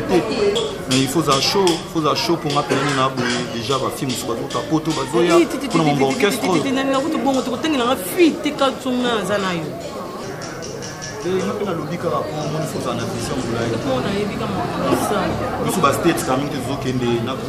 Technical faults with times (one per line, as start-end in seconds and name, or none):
none